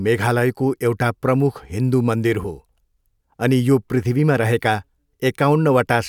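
No technical faults are audible.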